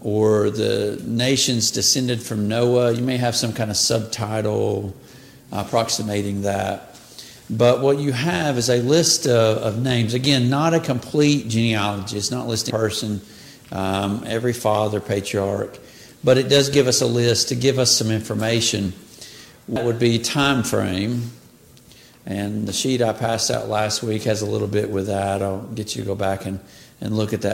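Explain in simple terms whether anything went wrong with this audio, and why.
Two quick glitches at 12.70 s and 19.76 s: damaged data in a compressed stream. The decoder hits broken bytes, loses its place, and you hear a brief blip.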